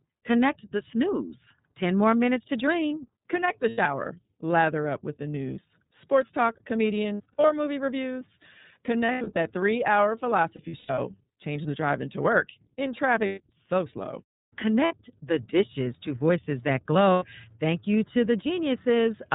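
The whole clip passes through the iLBC codec. The sound points to about 13 kbps with 30 ms frames. Nothing above 4 kHz survives, so the speech is narrowband and muffled at the top. The damage is plainly audible: each frame's excitation is coded on its own, which leaves a rough, slightly synthetic edge on every syllable.

Lost iLBC frames break in seven times. The first is at 3.69 to 3.78 s, about 90 ms, which fits three lost frames. Next comes 7.14 to 7.50 s, with gaps scattered over 360 ms and the longest run near 70 ms. Then 9.05 to 9.37 s, with the longest run about 100 ms. Then 10.55 to 10.98 s, spread over 420 ms, again with the longest run near 100 ms. Shorter losses follow at 13.26 to 13.40 s, 14.85 to 14.94 s and 17.13 to 17.24 s. In each gap the decoder repeats the last pitch cycle mixed with noise. This gives a held, buzzy or breathy vowel, and the voice recovers almost at once.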